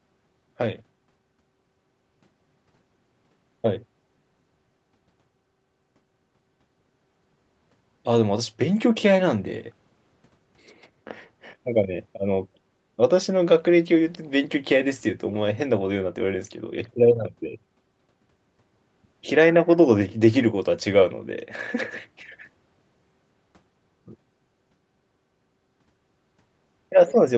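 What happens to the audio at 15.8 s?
Nothing goes wrong at 15.8 s; the speech there is intact, carrying only the normal high-frequency limit of a call path that passes nothing above about 8 kHz.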